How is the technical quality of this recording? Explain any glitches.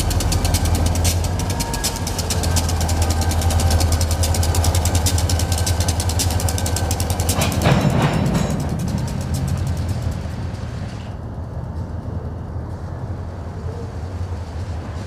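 No glitches turn up anywhere in this recording, so there's nothing technical to flag.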